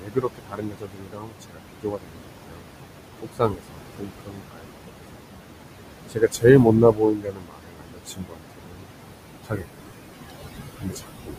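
Noise suppressor artifacts run through the whole recording, from 0 s to the end. The room noise sits only about 8 dB below the speech, so the suppressor judges each band frame by frame and pulls down whatever it hears as steady noise, by about 21 dB. Between phrases the background sinks away and then returns under the speech.

Speech cut by the noise suppressor happens six times: 0.0–2.68 s, 3.22–4.92 s, 6.09–6.45 s, 6.64–8.91 s, 9.44–9.83 s and 10.77 s to the end. In each of these spans the suppressor mistakes parts of the speech for noise and drops them by about 20 to 22 dB. Roughly two seconds are affected in the first and fourth spans, about a second in the second, and a few tenths of a second in the others. Soft consonants and word endings sound swallowed or faint.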